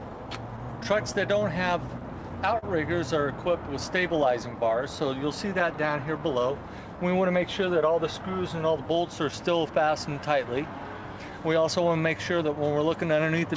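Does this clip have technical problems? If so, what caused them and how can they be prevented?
Yes. Clock drift between sender and receiver runs through the whole clip. The sender's clock is a few percent slow, so the receiver's jitter buffer keeps draining. On a spectrogram this appears as small, unevenly spaced seams. Prevent it with proper drift compensation or resampling at the receiver.

Repeated timing corrections from 0.10 to 13.41 s stretch the audio to about 97% speed and add about 0.4 s overall. The waveform shows tiny duplicated segments. Smoother time-scale modification would make these edits less audible.

A short stall from a late packet at 2.58 to 2.64 s holds the sound for 41 ms. It appears as a smeared, flat-textured patch on the spectrogram. Larger or adaptive jitter buffering would prevent this stall.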